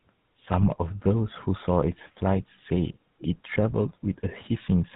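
Throughout the clip the speech passes through the GSM full-rate codec. The coder rebuilds the voice from a vocal-tract filter driven by a coarse, regularly spaced pulse excitation, and the thin, heavily quantised result fits the 13 kbps full-rate scheme. Nothing survives above 4 kHz, so the speech is dull and band-limited. The sparse excitation gives every voiced sound a plainly audible buzzy, gravelly roughness.

From 0.59 to 0.68 s a burst of GSM bit errors corrupts the decoder's parameters. The span fits about five 20 ms frames, and the damage points to an error rate of around 2 percent. Scrambled filter, pitch and gain values warp the spectrum and throw the level around from frame to frame. The speech there breaks into a short squawking, gargled stretch with abrupt pops before the coded sound resumes.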